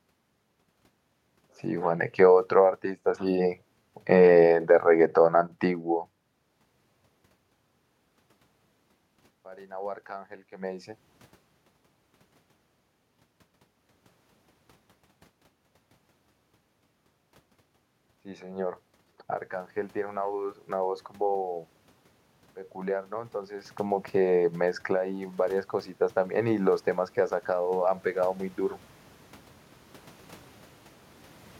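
From 18.08 to 21.08 s, automatic gain rising lifts the level by about 5 dB as the control decides the input is too quiet, then again from 22.45 to 28.59 s by about 8 dB. Voice and room noise swell together. On a waveform the envelope ramps up steadily; on a spectrogram the noise floor between phrases brightens across all frequencies along with the speech.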